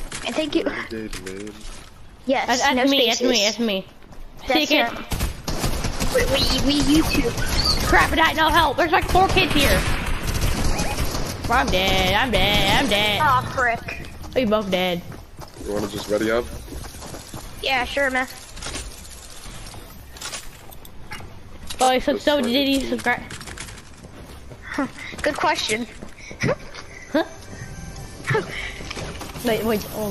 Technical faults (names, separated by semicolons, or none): repeated frames